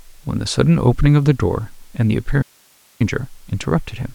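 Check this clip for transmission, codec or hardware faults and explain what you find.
There's one fault in this speech: an audio dropout to a faint residue from 2.43 to 3.00 s, where the signal abruptly vanishes for about 0.58 s, leaving only hiss well below normal level, likely a brief break upstream.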